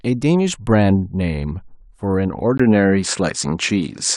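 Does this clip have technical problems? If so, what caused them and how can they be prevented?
Yes. From 2.58 s to the end, after a brief 20 ms gap, the sound loses everything above 9.5 kHz and gains a small level shift and a faint new noise floor. That combination points to the input likely being switched to a poorer device, not a simple filter or codec bandwidth drop, which would not change the background noise. Locking the recording input to one microphone and disabling automatic device switching prevents this.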